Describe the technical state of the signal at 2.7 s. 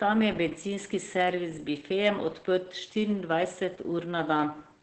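At 2.7 s, Opus voice compression runs throughout: a linear-prediction coder codes the excitation coarsely, leaving speech muffled, hoarse and slightly robotic, with nothing above 8.5 kHz, which points to a very low bitrate near 10 kbps.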